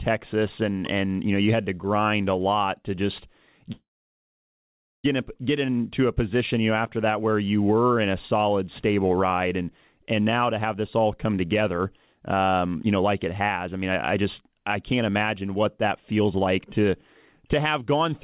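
At 3.72 s, right after "a lot to just", the speech stalls into a short fading buzz and then about 1.2 s of silence. It resumes at 5.06 s with "in get into a", with nothing lost but everything now arriving about 1.3 s late. This call audio freeze is likely caused by delayed packets emptying the jitter buffer.

From 10.26 s to 16.89 s, starting after "stable ride and and", the speech sounds hurried, running about 8% fast with unchanged pitch. It sounds the same way again from 17.40 s to 18.13 s, at about 7% fast. This is jitter buffer speed-up, where the receiver trims a series of pitch-period slices to shrink a backlog, roughly half a second in the first stretch. Throughout, the G.711 call path leaves nothing above 4 kHz.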